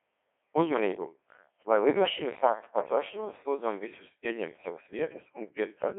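From start to finish the speech has passed through the Codec 2 vocoder, at a very low rate consistent with its 1.6 kbit/s mode. Rather than preserving the waveform, the decoder rebuilds the voice from sine waves driven by pitch, voicing, energy and a coarse spectral envelope, so the damage is heavy: the voice sounds robotic and buzzy. The band is confined to roughly 200 Hz to 3.4 kHz, with nothing above 3.6 kHz.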